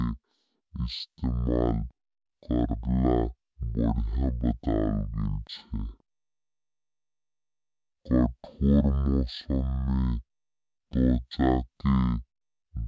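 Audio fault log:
Throughout: wrong sample rate. Speech runs at half speed and a full octave low. This fits 32 kHz audio played back at 16 kHz without conversion.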